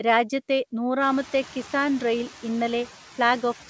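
Speech in which the background noise ducks between phrases and swells back under the talking. These are noise suppressor artifacts: a suppressor is pulling down the bands it judges to be steady noise, by about 6 dB, frame by frame, so the noise floor pumps with the speech. The effect stands out more after the room noise rises by about 20 dB at around 1 s, where it sits about 19 dB below the speech. Nothing is heard above 8 kHz, which fits a wideband call codec such as G.722.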